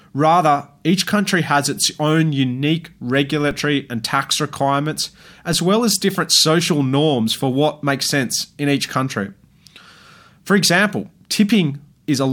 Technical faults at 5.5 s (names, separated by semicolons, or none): DC step